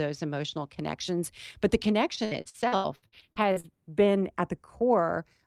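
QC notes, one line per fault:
Throughout, channels drifting apart: the two sides run on slightly mismatched clocks, sliding to a fraction of a millisecond apart, so a mono sum gets a slow flange.
2.15 to 3.66 s, repeated packet loss (robotic sound): right after "emotional connections but the", twelve dropouts up to 80 ms get patched by stretching the last sound, so it goes choppy and robotic.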